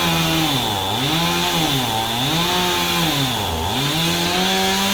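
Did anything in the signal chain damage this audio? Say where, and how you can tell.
No, nothing in the signal chain has audibly damaged this recording of everyday sounds, and the signal holds steady throughout.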